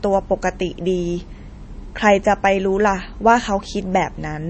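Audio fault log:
Throughout, MP3 compression: the speech has nothing above 8.3 kHz and carries a plainly audible watery, swirling texture, with s sounds chirping metallically and consonant onsets smeared. The likely cause is an MP3 encoder short of bits, which fits a low rate around 32 kbps. It cut the treble at a fixed point and dropped weak frequency lines that flicker between frames. A simple low-pass filter would dull the sound without that shifting, bubbly residue.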